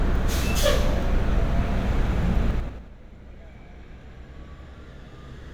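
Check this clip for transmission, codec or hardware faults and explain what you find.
One fault. From 2.51 to 2.88 s, zipper noise: a gain drop of roughly 20 dB is applied in unsmoothed 5 dB jumps, about ten per second, so the sound ticks as it falls.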